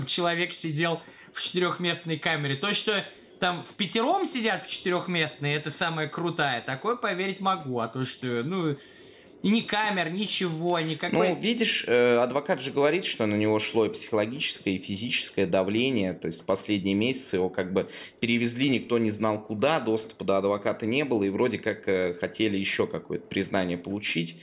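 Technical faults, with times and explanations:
No technical faults are audible anywhere in the clip.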